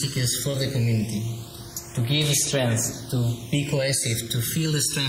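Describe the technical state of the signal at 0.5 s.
Short concealed packet loss occupies 0.51 to 0.55 s: about 20 ms of audio failed to arrive in time, and the receiver bridged the gap by extending the preceding sound before crossfading back into the real stream. The result is a brief smeared, wobbling patch. Underneath, the channels are drifting apart because they run on independent clocks a few hundred parts per million out of step. The inter-channel delay grows slowly, to roughly a millisecond by the end, so a mono sum has comb notches that sweep gradually, heard as slow flanging.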